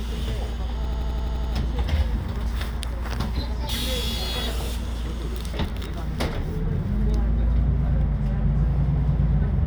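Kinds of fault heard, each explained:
System hang loop: the playback system froze and the hardware kept replaying one ring buffer, so an 85 ms slice repeats eight times at 11.7 Hz from 0.85 to 1.54 s, which fits a 4096-sample buffer. This gives a machine-gun stutter, shown as identical repeating waveform blocks and vertical spectrogram stripes.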